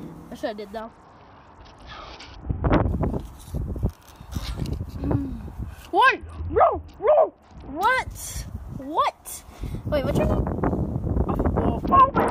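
At 0.80 s the sound loses its top end and turns gritty until 2.88 s. This is a Bluetooth SBC bit pool drop. The link got congested, so the sender cut the bits per frame. The highest sub-bands were starved and the rest coarsely quantised. The change is severe and fits a bit pool falling from 31 to 7, near 61 kbps. It recurs from 6.06 to 7.83 s, and again from 11.85 s to the end.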